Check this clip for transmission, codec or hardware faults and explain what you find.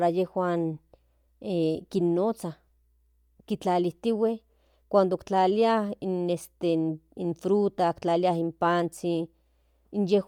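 One fault runs through the whole clip: Bluetooth LC3 compression. The speech has a plainly audible breathy, grainy edge, with the upper frequencies sounding hissy rather than crisp, and nothing is present above about 20.2 kHz. This is likely the LC3 codec of Bluetooth LE Audio. It codes the signal in short transform frames, here fitting 10 ms, and at a bitrate around 48 kbps it discards much of the upper spectrum and fills the gaps with noise.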